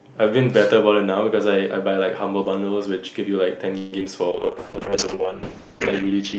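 Repeated packet loss (robotic sound) runs from 3.77 to 4.07 s. Four holes open in quick succession, the longest 146 ms, and each is patched by stretching the preceding sound, so about half of that stretch is filler. The speech turns choppy, with fragments missing.

A call bitrate drop begins at 4.32 s and lasts to the end of the clip. The bandwidth estimate fell, and the coarse coding that follows fits Opus going from about 40 kbps down to roughly 6 kbps, holding at the bottom for about 1.26 s. The speech sounds rough, watery and muffled as the upper frequencies thin out.

A jitter buffer slow-down overlaps this from 4.48 to 5.27 s. Short of reserve, the receiver repeated single pitch periods and bits of pauses, adding 78 ms. The speech plays at about 91% speed with unchanged pitch, sounding drawn out.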